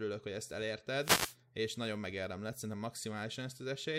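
At 0.99 s a wireless microphone noise hit lasts until about 1.37 s. The FM radio link fades as reflected signals cancel at the receiver, letting receiver noise surge up, heard as a short burst of static washing over the speech.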